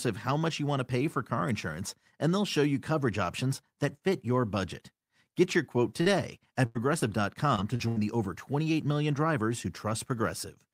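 From 5.43 to 7.98 s the speech breaks up with repeated packet loss, producing a robotic sound. The sound points to about seven separate dropouts in quick succession. Each hole is covered by stretching the last bit of sound forward. About 320 ms goes missing in total, and the longest gap is 90 ms. Concealment covers roughly a tenth of the stretch. The result is choppy speech with pieces missing.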